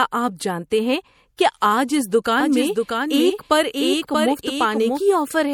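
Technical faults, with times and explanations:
Throughout, MP3 compression: watery, swirly sound with a dulled top end and smeared onsets, likely from heavy lossy encoding that fits a bitrate near 64 kbps.
2.40 to 5.00 s, doubled audio track: a dry full-band copy about 5 dB quieter trails roughly 0.7 s behind, starting and stopping abruptly, likely from an out-of-step second copy.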